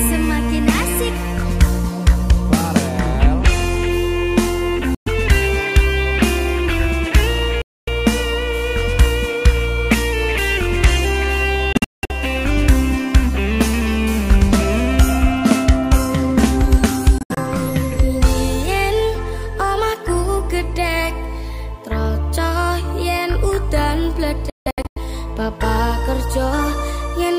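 The audio is interrupted by five silent gaps, at 4.95–5.08 s, 7.62–7.89 s, 11.73–12.12 s, 17.18–17.38 s and 24.50–24.98 s. The last three break into several short holes rather than one, the longest stretch near 0.19 s. Each gap starts and ends abruptly or with a fade of a few milliseconds, and the sound resumes as if it had played on. This is likely a Bluetooth dropout from packets arriving too late. On a waveform or spectrogram these show as clean-edged blank columns.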